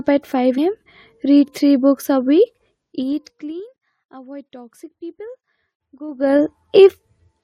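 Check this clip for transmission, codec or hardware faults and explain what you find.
Two faults are audible.

At 0.57 s, just before "am read three books", compressed frames were skipped: about five 23.2 ms frames dropped, so roughly 100 ms vanishes.

From 6.07 to 6.41 s, zipper noise occurs: a level change of about 25 dB is applied in unsmoothed 2 dB steps, roughly 30 per second, each step ticking audibly.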